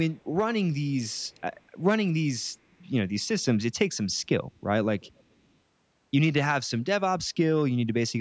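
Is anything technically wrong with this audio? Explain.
Yes. The speech carries echo leak in three places: a brief scrap at 0.16 to 0.24 s, a longer stretch from 1.03 to 1.82 s, and another from 5.0 to 5.24 s. The likely cause is a far end listening on a loudspeaker whose echo canceller let part of the returning audio slip back into its microphone. The result is a faint, delayed copy of the speech trailing about 373 ms behind, very quiet in the first scrap and somewhat stronger, though still well below the main speech, in the later two.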